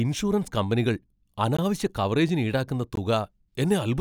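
A block of digital silence hits at 1.57 s and again at 2.96 s: each time about 17 ms of the speech drops to silence, likely because the output buffer wasn't filled in time. The cut and return are abrupt, with no fade.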